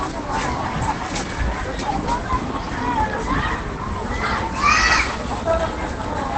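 Throughout, Opus compression has dropped to its low-rate speech mode, likely at around 16 kbps, so the sound is muffled and hoarse, with nothing above 8.6 kHz.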